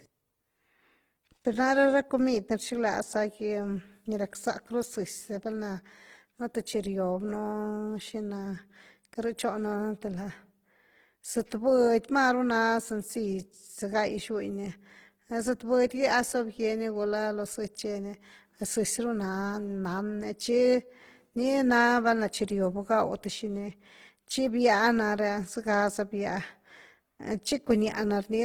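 Throughout, Opus compression, likely in CELT mode at a rate that fits about 16 kbps, noise-fills starved bands, leaving the speech rough and grainy.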